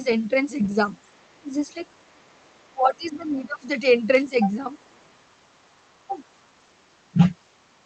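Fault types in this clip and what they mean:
Other side's voice leaking through: the echo canceller likely failed to fully remove the far end's loudspeaker sound picked up by the microphone, so a second voice slips in, once at about 25 dB below the talker near 0.63 s, then faintly, about 40 dB down, around 0.86–1.37, 1.89–2.67 and 4.8–5.1 s.
Speech suppressed in double talk: with both sides talking at once, the echo canceller likely mistook the talker for echo and turned everything down, so the talker's voice dips by up to about 20 dB at 1.4–1.58 s and across roughly a second from 2.71 s, with a lighter dip near 6.1 s.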